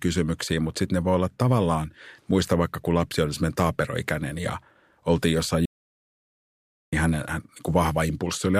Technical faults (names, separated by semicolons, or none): audio dropout to silence